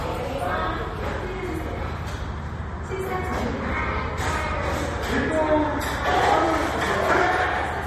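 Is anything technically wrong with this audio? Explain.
Yes. Throughout, the audio stops dead above 13 kHz and sounds watery and swirly, likely from MP3 compression at a bitrate near 40 kbps, starving weak frequency lines.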